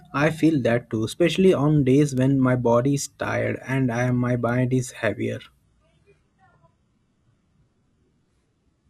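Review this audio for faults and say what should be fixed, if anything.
Two bit error spikes show up as single sharp ticks, at 2.18 s right after "too especially on days" and at 4.49 s after "tired and I my". Each one is one sample where a flipped bit jumped the value by a power of two and back, so it's broadband and unrelated to the speech. Error-checked links and ECC memory would stop those.

From 5.64 s, just after "is heavier", to the end, the treble suddenly thins and goes synthetic with no gap. That's an adaptive stream at a lower bitrate, and it fits a drop from around 96 kbit/s AAC to roughly 12 kbit/s HE-AAC. A steadier connection or a higher bitrate floor would keep it up.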